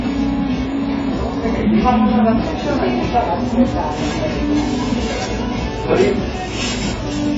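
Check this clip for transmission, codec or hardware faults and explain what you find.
There's one fault, and it runs the whole way through: AAC compression damage. Nothing comes through above 7.7 kHz, so the top end is gone and the sound is dull and smeared, with a warbly, fizzy texture. The heavy damage likely comes from AAC-LC at a very low bitrate, around 16 kbps, starving the coder of bits.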